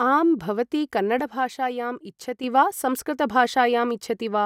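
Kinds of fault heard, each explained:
One channel drops out: just after "आं भवती", from 1.20 s to 2.44 s, the speech abruptly falls by about 6 dB for roughly 1.2 s, then snaps back to its earlier level. The likely cause is one stereo channel going silent while the other continues. When the two are summed to mono, material common to both channels loses half its contribution, and anything carried only by the missing side vanishes for that stretch.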